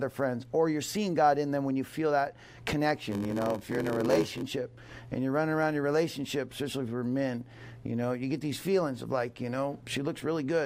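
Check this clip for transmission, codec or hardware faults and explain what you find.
One fault is present: a block size mismatch (padded) from 3.08 to 4.43 s. One stage hands over blocks shorter than the next reads, zero-filling each remainder. The gaps buzz at 93.8 Hz, fitting 512-sample reads, and the audio slows to 0.861 speed, yet timbre holds, unlike a sample-rate error.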